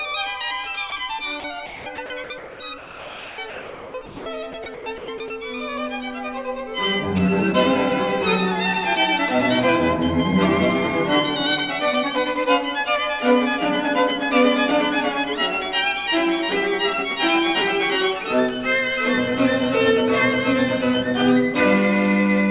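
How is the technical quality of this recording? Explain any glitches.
The trouble is all in the first 5.3 seconds, with everything capped at 4 kHz by the narrowband call path. At 0.9 s there's a single 20 ms gap where the sound drops out to a steady noise, most likely a voice detector mistaking a quiet moment for background and stopping sending, so the receiver played comfort noise instead. From 1.4 to 4.26 s, and again from 4.52 to 5.3 s, the sound is chopped, likely by the voice detector as it flips between sending and muting, about 1.8 s and 0.3 s of it swapped for synthetic noise, so it comes out choppy.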